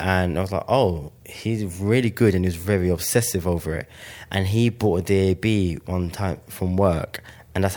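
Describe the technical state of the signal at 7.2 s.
At 7.16 s there is a dropped buffer (overrun): a jump in the speech, and no gap of silence. The likely cause is the capture side failing to read its samples before the hardware wrote over them, so that stretch was discarded and the audio on either side was butted together. Only a millisecond or two went missing, so the skip is brief and no part of a syllable is audibly lost.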